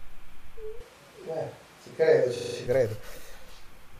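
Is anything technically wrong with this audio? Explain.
Yes, there are two problems, and they overlap near the end.

From 0.81 s to 2.66 s the speech goes roomy and hollow all at once, losing its low end, then snaps back just as abruptly. That's a switch to a distant microphone, most likely the close mic dropping out so the recording fell back on something further away. The level stays about the same, but the room noise comes up to roughly 30 dB below the speech.

Inside that stretch, from 2.36 s to 2.56 s, there's a system hang loop. A 40 ms slice of audio repeats exactly five times, giving a rough buzzy stutter at 25 Hz. What happens there is the machine or its driver stalls while the sound hardware keeps cycling the same ring buffer, so the last 40 ms just plays over and over until things recover. Essentially nothing is lost, because the sound picks up where it left off.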